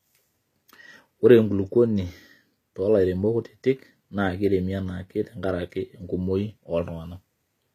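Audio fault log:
Throughout: HE-AAC compression. The speech carries plainly audible codec damage, likely from HE-AAC at a low bitrate around 24 kbps. Only the lower spectrum sounds truly coded. The treble above it is rebuilt by copying lower bands upward and shaping them coarsely. So s sounds stay bright but turn gritty, metallic or lispy, because their harmonics no longer line up across the crossover. Nothing is heard above about 14.9 kHz.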